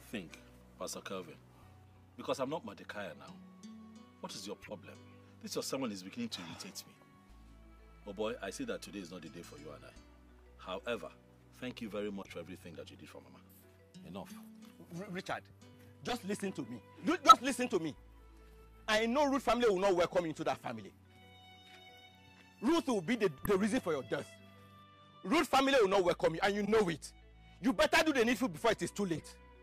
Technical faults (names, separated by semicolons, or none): corrupt frame decoded